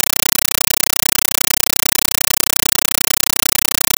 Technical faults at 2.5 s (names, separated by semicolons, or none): compressed stream played as audio